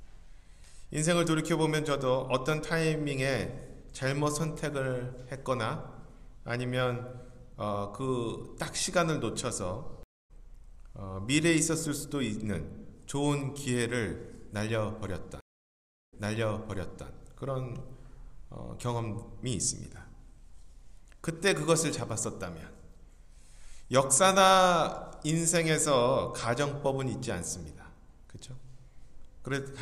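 At 10.03 s a stream reconnect drops the sound for 264 ms, a flat gap in the waveform, and it resumes roughly 0.3 s further on, skipping material. At 15.41 s a 720 ms dropout follows, then playback restarts 952 ms earlier, so a stretch repeats until 17.08 s, visible as a duplicated spectrogram pattern.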